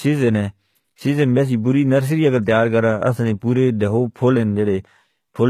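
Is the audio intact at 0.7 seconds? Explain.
No. HE-AAC compression is likely at work here, across the whole clip. The treble is rebuilt from copied lower bands, so sibilants turn gritty and metallic. Nothing sounds above 14.9 kHz, and the plainly audible damage fits a very low bitrate, around 20 kbps.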